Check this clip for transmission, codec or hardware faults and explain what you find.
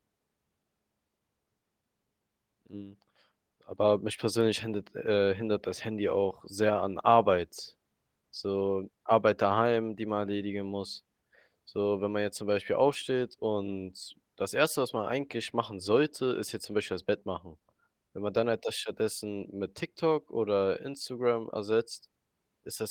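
Checking this clip, I find no faults to explain.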